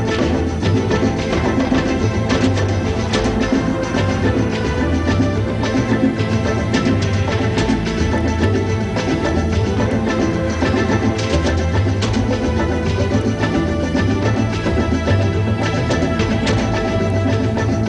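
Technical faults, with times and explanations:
No technical faults detected.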